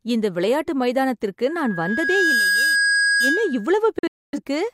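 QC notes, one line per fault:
1.47–3.71 s, loudspeaker feedback squeal: just after "இந்த விளையாட்டு மைதானத்திற்கு", the microphone starts picking up the loudspeaker it drives, and at one frequency the round-trip gain passes unity, so that frequency feeds on itself. A single tone near 1.6 kHz swells over roughly a second into a steady squeal that ends up about 5 dB louder than the speech, sitting on top of the talker until it stops at 3.71 s.
3.99–4.39 s, digital broadcast dropout: the receiver stopped getting usable frames, likely from lost signal or failed checksums, and muted until clean data returned. Audio drops out with a quick 3 ms fade in a cluster of holes spread over about 340 ms, with the longest gap 256 ms, roughly 300 ms missing in total, which points to about seven lost frames. The speech sent during those gaps is gone rather than delayed.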